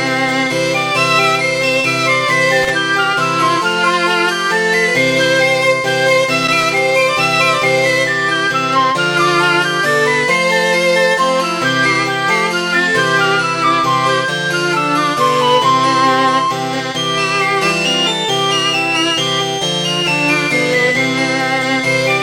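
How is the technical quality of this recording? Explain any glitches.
The recording has two glitches of one kind. Loose connector crackle at 2.63–2.70 s and 6.43–6.78 s: a worn contact makes and breaks, chopping the signal into irregular bursts of scratchy crackle.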